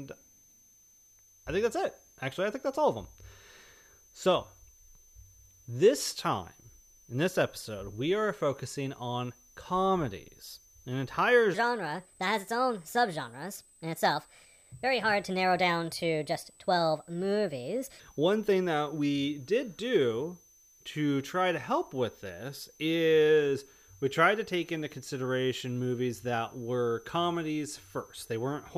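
Right from the start there's a switching supply whistle under the speech: a thin, high tone wandering between about 6.1 and 6.3 kHz, sitting roughly 30 dB below the voice. That's a switching power supply running in an audible burst mode, or two of them beating.

Then from 11.54 s to 18.0 s you get a section at the wrong speed. It plays 1.31 times faster, so the voice jumps up about five semitones and sounds hurried and chipmunky, and speed and pitch both snap back at 18.0 s. The likely cause is that stretch being played or edited against the wrong clock.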